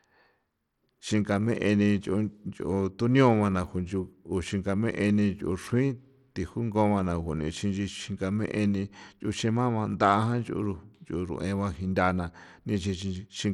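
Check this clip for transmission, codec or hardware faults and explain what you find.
There's one fault, and it runs through the whole clip. The speech has clearly audible Bluetooth SBC compression damage, likely from a starved bit pool. SBC splits the signal into a few wide bands and hands out bits crudely, so the top bands lose out. Nothing survives above 16.8 kHz, the treble flickers, and a gritty, aliased grain sits on everything, which fits a bitrate around 96 kbps.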